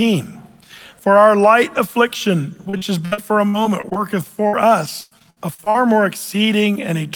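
The audio shows repeated packet loss (robotic sound) in two stretches, from 2.69 to 3.97 s and from 5.01 to 5.76 s. In each stretch, short holes were patched by extending the preceding sound, so the audio turns choppy. In the first stretch about 300 ms is missing, none of the gaps longer than 59 ms, and concealment makes up 23% of the span. The second stretch is denser, with 36% concealed and one gap of 100 ms. On a spectrogram, these stretches appear as repeated blocks of frozen, smeared sound with abrupt edges. The waveform shows the same shape repeating where the real signal is missing. Between them, at 4.47 to 4.55 s, a burst of packet loss removes about 60 ms. The receiver held the last sound and faded it out, then resumed further ahead. This appears as a short, flat, decaying band on a spectrogram and a tapering patch in the waveform, followed by a jump where the audio picks up again.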